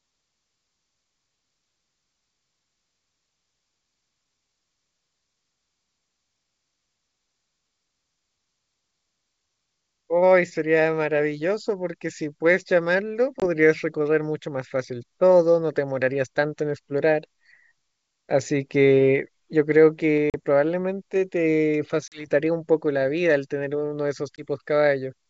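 A speech clip carried over G.722 wideband telephone coding, whose faint upper-band hiss fits the full 64 kbit/s mode, shows packet loss on an ADPCM call four times: hard silent gaps of 20 ms at 13.40–13.44 s, 40 ms at 20.30–20.35 s, 40 ms at 22.08–22.27 s and 20 ms at 24.36–24.44 s, each about one or two packets' worth. Unlike a plain mute, each gap is followed by brief distortion as the decoder's predictor and step size recover their lost state.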